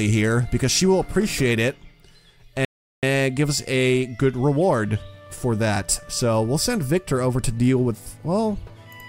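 At 2.65 s the player exhausted its downloaded audio and had to wait for more data: a rebuffering stall. The sound drops to silence until 3.03 s, then picks up exactly where it halted, losing nothing but adding about 0.38 s.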